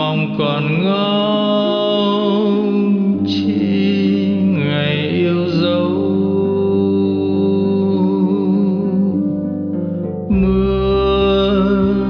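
No technical faults can be heard anywhere in this recording.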